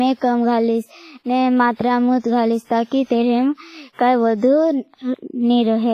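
Heavy WMA compression, likely, runs through the whole speech clip. Nothing remains above 15.4 kHz, and the damage fits a low bitrate near 24 kbps: weak components are zeroed and quantisation noise smears across long transform blocks, giving a ringing, washy sound with hiss that breathes with the signal.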